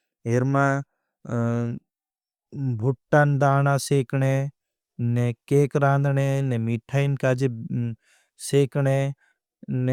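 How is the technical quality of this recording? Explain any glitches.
No technical faults or glitches can be heard in the speech.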